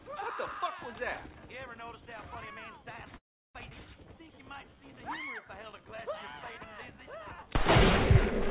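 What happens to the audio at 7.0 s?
A jitter buffer slow-down runs from 6.59 to 7.48 s. The receiver repeats short pitch periods, adding 50 ms, so the audio plays at 95% speed at unchanged pitch.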